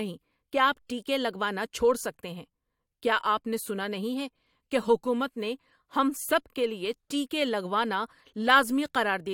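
No technical faults can be heard anywhere in the speech.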